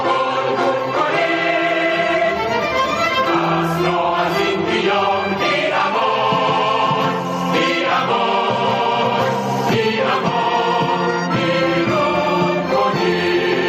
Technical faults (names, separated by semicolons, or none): gain pumping